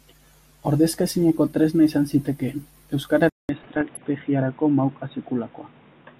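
It's a speech clip, and at 3.29 s it goes quiet for about 200 ms, then comes back dull with nothing above 3.8 kHz and a new noise floor roughly 30 dB down, likely an input switched to a poorer device. From 3.60 to 4.04 s there's DAB burbling on top: reception bit errors at about 0.4% hit 19 frames, putting blips of noise in single sub-bands and, where wrong scale factors get through, making sub-bands jump in level for up to a frame.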